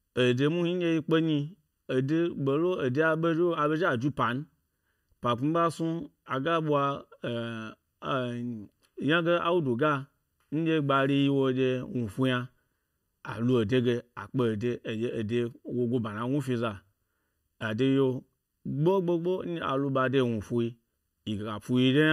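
Channel delay (comb filtering) runs through the whole speech clip. One channel lags by under a millisecond before mono summing. Notches from around 700 Hz make it hollow and phasey.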